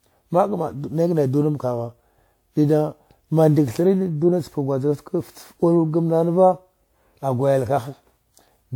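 Throughout this speech clip there is a swirling, smeared quality, with a hollow tone and softened attacks on consonants, well beyond what a single moderate-bitrate encode would leave, though content still reaches up to about 20.1 kHz. This is generation loss, likely from about five rounds of decoding and re-encoding with a codec that sounds like WMA at around 96 kbit/s. Each pass quantises on a shifted frame grid, so noise piles up.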